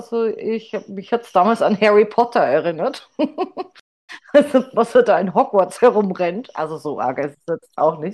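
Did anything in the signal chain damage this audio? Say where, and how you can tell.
Yes, a stream reconnect at the network stage. From 3.80 to 4.10 s the speech drops into about 0.29 s of silence and resumes roughly a fifth of a second further on, skipping material. The connection broke, the player reconnected, and a fresh decoder restarted mid-stream.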